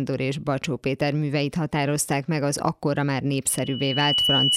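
A piercing tone near 2.9 kHz rises out of this speech recording right after "meg az akkora már", starting at 3.49 s. It swells over about 0.7 s into a steady squeal that ends up roughly 5 dB louder than the voice and carries on to the end of the clip. This is loudspeaker feedback squeal. The microphone is hearing the loudspeaker it drives, and at about 2.9 kHz the round trip gains more than it loses, so that one frequency keeps reinforcing itself until the system's limits hold it.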